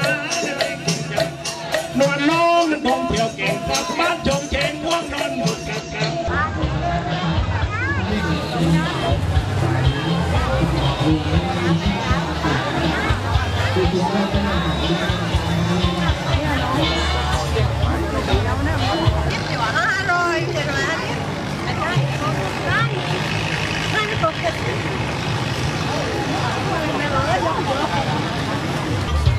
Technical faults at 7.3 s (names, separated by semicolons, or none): digital radio blending to analogue